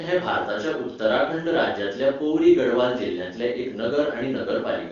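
No technical faults can be heard in this speech recording. It carries the wideband band-limiting of the AMR wideband (HD Voice) codec, with speech that stays clear and at most faint coding traces, which fits one of the codec's higher rates, around 23.85 kbit/s.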